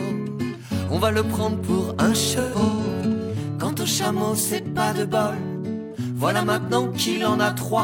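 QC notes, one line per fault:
2.33–2.93 s, AAC frame loss with concealment: the decoder lost scattered chunks of the stream, about 340 ms in total, spread over roughly half a second, which fits around eight lost frames. Each gap was filled by re-using the last good spectrum with scrambled phase or estimated energy, so the patch sounds smeared, noisy and phasey. The longest unbroken gap was around 150 ms.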